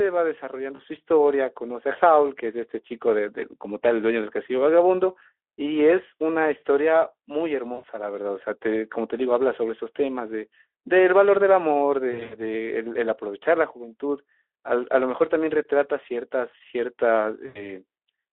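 At 0.75 s, 7.73 s, 12.11 s and 17.45 s the speech drops out briefly and VoIP packet loss concealment, handled by the narrowband Speex decoder, takes over. Lost spans are 40 ms, 100 ms, 120 ms scattered over 200 ms (longest run 80 ms), and 100 ms, fitting 20 ms frames. The decoder repeats its last pitch and filter while lowering gain, so each gap becomes a buzzy tone or coloured noise that fades. A spectrogram shows smeared, flat bands, and the waveform shows a decaying envelope.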